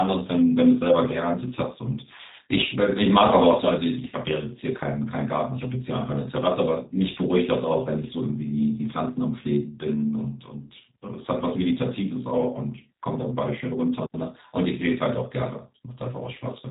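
Speech throughout sounds narrow, slightly rough and synthetic, with plainly audible codec damage and nothing above about 4 kHz. This is G.729 codec coding, which fits 8 kbit/s: each short frame is rebuilt from a vocal tract filter, pitch predictor and a few pulses.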